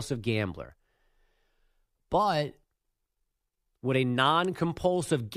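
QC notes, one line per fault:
No faults found in this clip.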